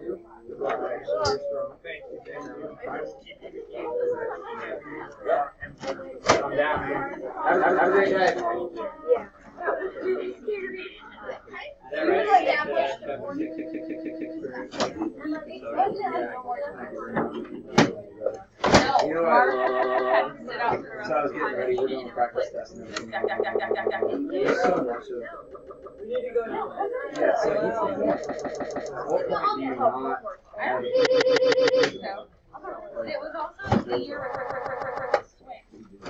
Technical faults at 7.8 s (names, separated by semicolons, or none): repeated frames